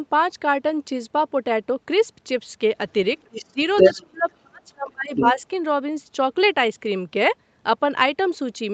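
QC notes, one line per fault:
3.22–3.45 s, 3.75–4.03 s, 4.31–4.37 s and 5.15–5.41 s, other side's voice leaking through: a second voice appears in short scraps under the talker. It sits roughly 15 dB below the speech at first, then about 5 dB above it at 3.75 s. At 4.31 s it is a faint trace, around 40 dB down, and by 5.15 s it is near 5 dB below. The likely cause is loudspeaker playback picked up by the microphone and left behind by an incomplete echo cancellation.
3.44–3.58 s and 3.94–5.41 s, speech suppressed in double talk: the talker's level dips hard while the far side is playing on the loudspeaker. The first drop is brief, about 150 ms and roughly 25 dB deep. The second is longer, about a second of attenuation within that range and reaching around 30 dB. This is likely the echo canceller failing to separate near-end speech from the echo and turning both down together.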